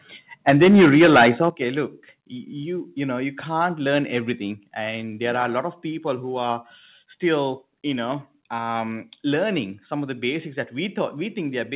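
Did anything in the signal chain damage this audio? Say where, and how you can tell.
Yes. From 0.48 to 1.48 s, just before "look you you know", peaks flatten and crackle, with a fair chunk of samples clipped. That's likely microphone overload at the converter, about 12 dB over.

The level drops in steps at 0.5 s (about 4 dB), 1.5 s (about 10 dB) and 4.56 s (about 2 dB, between "know you can't learn" and "and there are a"). That's likely call processing applying a microphone volume step-down.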